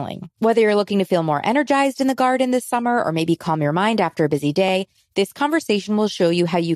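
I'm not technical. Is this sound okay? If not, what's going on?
No. At about 4.68 to 4.71 s there are repeated frames. A tiny chunk of sound, about 26 ms long, plays twice in a row. You hear a quick stutter or small click. That fits one compressed block being sent again, which adds 26 ms.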